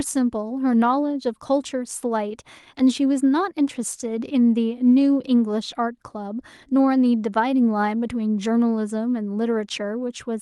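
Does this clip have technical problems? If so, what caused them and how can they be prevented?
No, nothing in this speech clip points to a technical problem. It has passed through a WebRTC call path, and the top end stops at about 12 kHz, which fits an Opus codec running in its usual mode.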